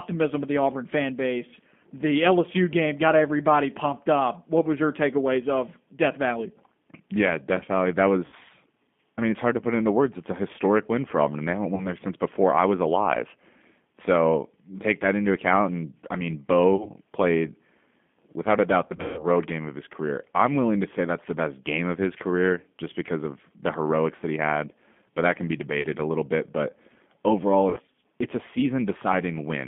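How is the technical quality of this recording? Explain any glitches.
The quality is narrowband telephone speech with audible codec coarseness throughout, plus six short dropouts where the decoder fills in lost audio.

G.729 codec: The whole clip is confined to roughly 200 Hz to 3.5 kHz, so there is no air or sibilant crispness. At 8 kbit/s the decoder rebuilds speech from a vocal-tract filter and a sparse pulse pattern, which gives it a plainly rough, slightly synthetic texture.

VoIP packet loss concealed by the speech codec: Glitches occur at 8.26–8.35 s, 11.75–11.87 s, 16.76–16.90 s, 18.87–19.27 s, 25.81–25.88 s and 27.70–27.80 s. The decoder stretches its last pitch and filter state, producing a buzzy, fading smear. The 18.87 s event is scattered losses with about a 150 ms run.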